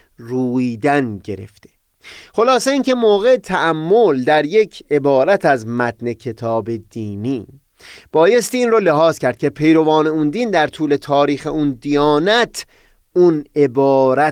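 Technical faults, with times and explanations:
No technical faults detected.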